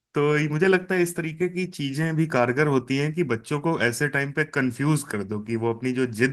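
No technical faults can be heard in this speech recording. The Opus voice compression leaves only a light mark and keeps the full audio band, which fits hybrid coding at around 20 kbps.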